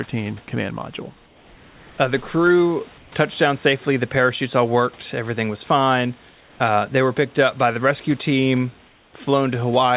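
At 2.98 to 3.12 s, 6.3 to 6.6 s and 8.86 to 9.14 s, the pauses between speech lose their room texture and become a smooth, featureless hiss, about 2 dB quieter in the first two gaps and about 3 dB quieter in the last. This is comfort noise in place of the background. The sender likely stopped transmitting while its voice detector heard no speech, and the receiver filled each gap with synthetic noise shaped roughly like the real background.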